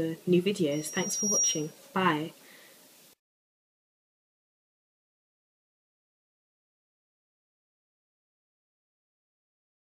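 At 0.71 s a loudspeaker feedback squeal begins. A microphone is catching its own loudspeaker, and the loop gain passes one at 5.7 kHz. That tone swells in under a second, peaking about 5 dB above the sound. It stops at 1.79 s.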